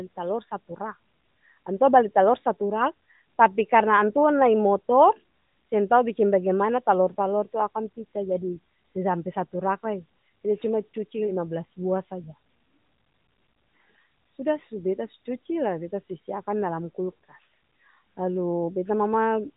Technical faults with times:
none

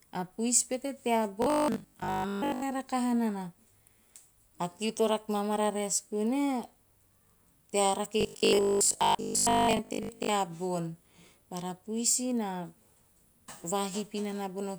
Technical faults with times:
1.42-2.62 robotic sound from repeated short buffers
8.21-10.31 robotic sound from repeated short buffers

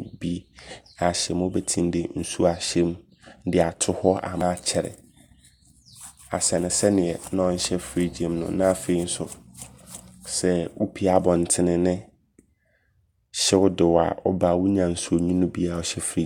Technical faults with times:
none

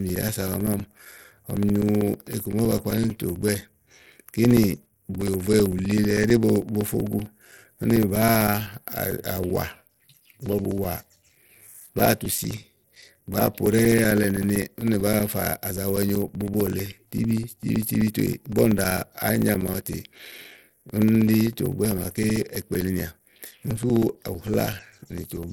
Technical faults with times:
0.00-25.52 Bluetooth SBC compression
0.09-25.44 periodic USB or driver dropouts

